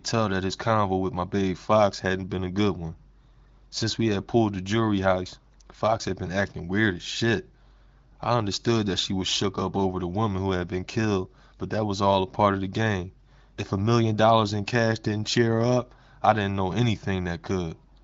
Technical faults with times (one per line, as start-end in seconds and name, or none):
none